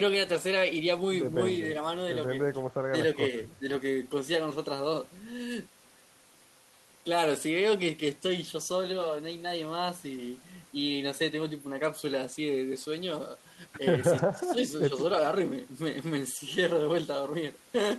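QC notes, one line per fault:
14.34–14.59 s, speech suppressed in double talk: the voice sinks by around 10 dB for about a quarter of a second. This is likely an echo canceller's suppression engaging while the far end was also talking: unable to tell the near talker from loudspeaker echo, it attenuated everything, so the local speech dips briefly and then returns to its previous level once the suppression releases.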